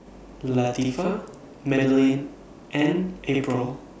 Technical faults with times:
0.00-4.00 channel delay (doubling)

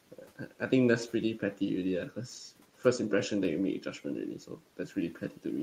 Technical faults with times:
0.12-0.72 speech cut by the noise suppressor
1.39-1.61 speech cut by the noise suppressor
2.60-2.85 speech cut by the noise suppressor
4.39-5.45 speech cut by the noise suppressor

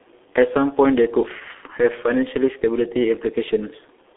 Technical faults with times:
0.00-4.17 G.723.1 codec

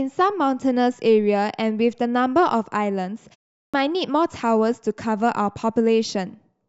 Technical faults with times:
3.57-3.74 clipped start after a pause

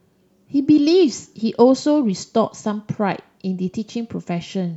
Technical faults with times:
none

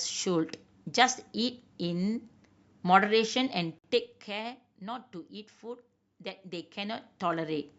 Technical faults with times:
3.79-3.84 gap at a join of encoded pieces

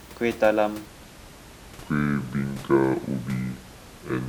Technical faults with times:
0.86-4.29 section at the wrong speed

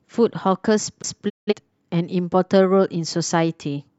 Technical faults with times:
1.02 CD skip
1.28-1.53 digital broadcast dropout

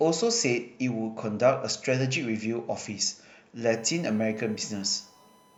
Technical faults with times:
3.70-5.57 USB whine

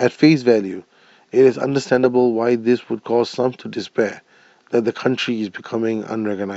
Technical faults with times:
none

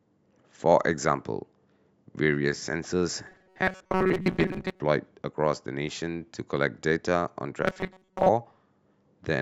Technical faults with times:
3.27-4.81 robotic sound from repeated short buffers
7.63-8.29 robotic sound from repeated short buffers

